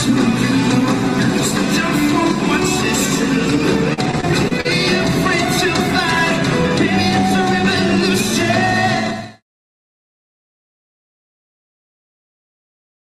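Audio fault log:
3.93–4.66 s, repeated packet loss (robotic sound): a burst of short holes, the longest about 39 ms, each patched by stretching the preceding sound, so roughly a fifth of this span turns choppy. The holes recur in quick succession, unlike a single isolated dropout, and end well before the smooth fade-out near 9.4 s.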